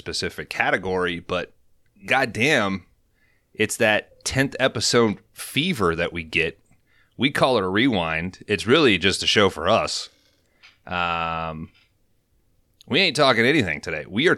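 No technical faults can be heard anywhere in the recording, and the signal remains intact and continuous throughout.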